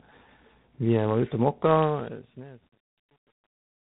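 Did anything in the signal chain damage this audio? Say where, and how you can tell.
Yes. Tandem speech coding runs through the whole clip, at the codec stage. The speech is rough, muffled and warbly, with nothing above 3.9 kHz. That fits AMR-NB at 7.95 kbit/s, then G.711 A-law, then G.726 at 24 kbit/s, each coder re-encoding the previous one's damage.

Truncation distortion on a fade appears from 1.81 s to the end, in sample-format conversion. As the fade-out, which starts around 1.8 s, gets quieter, the tail turns gritty. It is worst from 2.19 s onward. This points to an undithered gain stage keeping about 9 bits.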